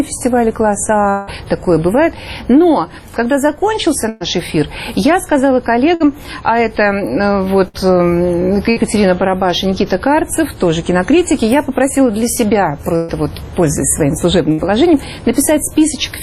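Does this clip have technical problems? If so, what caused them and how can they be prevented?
Yes. Around 1.09 to 1.30 s the last sound gets stretched into a fading buzz or hiss for about 0.18 s, then the audio picks up further on with that stretch gone, likely a long network dropout. A steadier connection and a larger jitter buffer would help.

There are also six bursts of packet loss, at 4.09, 5.94, 7.68, 8.70, 12.96 and 14.52 s. Each time the receiver holds the last sound and fades it for about 60 ms, or 120 ms at 4.09 and 12.96 s, then skips ahead. Forward error correction or a less congested network would cut these down.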